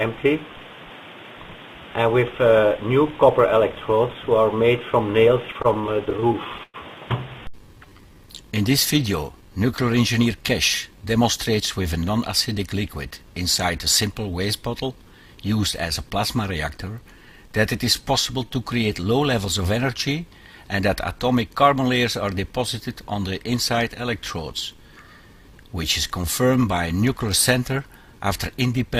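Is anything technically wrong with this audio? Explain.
Yes, there are jitter buffer problems. From 5.53 to 6.76 s, repeated stalls (stutter): the buffer ran dry 18 times, and the receiver held and faded the last sound for up to 107 ms. Nothing is lost, but it drags in audible breaks rather than stretching smoothly.

A jitter buffer slow-down at 7.78–8.22 s (85% speed, 73 ms added) and 17.13–18.50 s (95%, 75 ms added) repeats pitch periods to rebuild reserve. The audio stretches without breaks, and pitch stays unchanged, unlike a slowed playback clock.

A jitter buffer speed-up at 10.19–11.62 s (105%) and 20.48–21.91 s (107%) trims pitch periods, removing about 70 ms and 100 ms. The audio sounds hurried at unchanged pitch, with no gaps.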